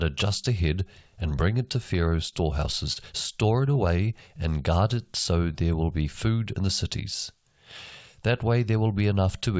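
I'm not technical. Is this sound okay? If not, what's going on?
No. At 2.30 s, and again at 2.93 s just before "store it away and", there's a short stall from a late packet: a sound is briefly stretched, but nothing is skipped.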